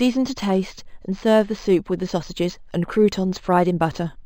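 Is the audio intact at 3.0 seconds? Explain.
No. Throughout the clip, including 3.0 s, there is imaging from linear upsampling: the speech was raised from 11 kHz to 44.1 kHz by straight-line interpolation. That weak filter dulls the top and leaves a mirror image from 5.5 to 11 kHz, about 30 dB down, heard as metallic shimmer on sibilants.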